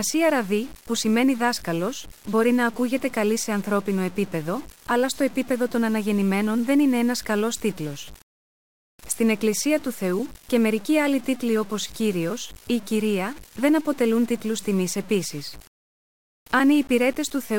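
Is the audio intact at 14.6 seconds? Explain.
No. The speech was likely reduced to about 6 bits by truncation with no dither, and this low bit depth without dither runs through the whole clip, including 14.6 s. The rounding error tracks the signal, adding grainy, gritty distortion roughly 25 dB below it that shifts with each sound.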